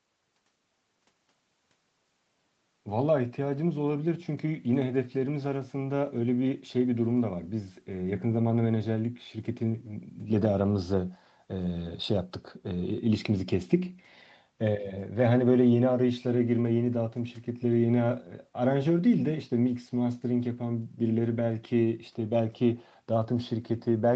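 No technical faults can be heard anywhere in this speech recording.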